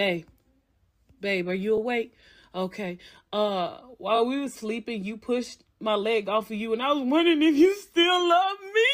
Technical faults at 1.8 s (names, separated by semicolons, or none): repeated frames